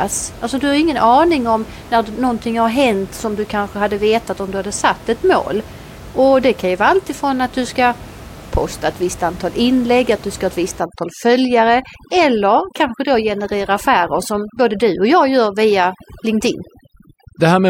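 From 10.8 s to the end at 17.7 s there's overdone noise removal: the reducer's gating bands too hard, so the room noise becomes twinkly near-silence.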